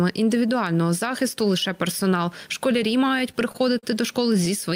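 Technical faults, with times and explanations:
3.19 to 3.84 s, repeated stalls (stutter). The sound halts five times in this stretch. Audio packets reached the receiver late, or more slowly than playback consumed them. Its jitter buffer kept running dry. Each time, the receiver stretched the last sound to cover the wait. The longest hold lasts 43 ms. The holds total 95 ms, about 15% of the span. No audio is lost. The sound simply catches and drags, giving a stuttering rhythm.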